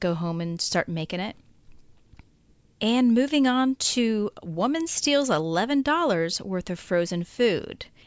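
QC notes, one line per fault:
No faults heard.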